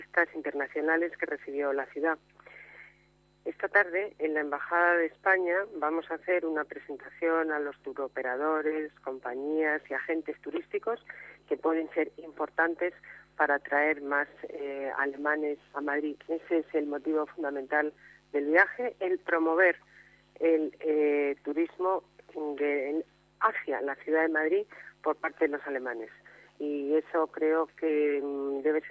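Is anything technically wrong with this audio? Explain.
No, nothing technically wrong stood out on listening to this audio.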